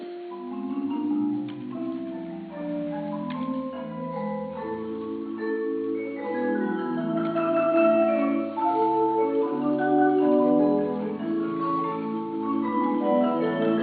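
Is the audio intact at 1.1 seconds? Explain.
Yes, the audio at 1.1 seconds is intact, with no dropout, click, distortion or other fault audible at that moment.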